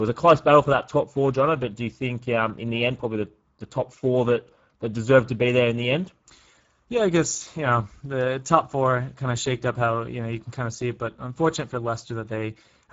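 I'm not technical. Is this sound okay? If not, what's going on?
No. The speech sounds hoarse and grainy from start to finish, the typical damage of the Speex codec, an older voice-chat compression squeezed too tightly. Unlike a bad connection, nothing cuts out. The roughness stays constant, and the sparkle of the top is gone.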